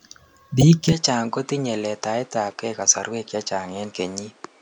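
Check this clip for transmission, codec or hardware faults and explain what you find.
Two faults are audible in this speech recording.

From 0.61 to 0.63 s there is damaged data in a compressed stream. Corrupted bytes make the decoder misread the frames there and lose sync. It then hunts for the next valid frame header. The result is a brief glitch in the sound.

From 0.92 s to the end, the sound turns duller and boxier with no gap at the change. Nothing is present above 10.5 kHz. The level drops about 5 dB, and new background noise appears well below the speech. The likely cause is an input switched to a poorer device.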